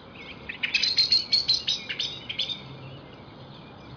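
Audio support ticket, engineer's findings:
No audible faults found.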